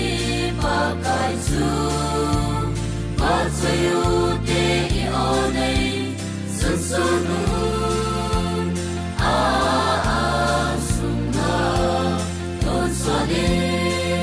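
No technical faults can be heard anywhere in the audio, and the signal stays steady and intact for its whole duration.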